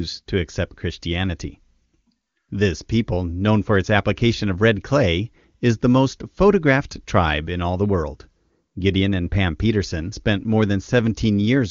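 No technical faults are audible.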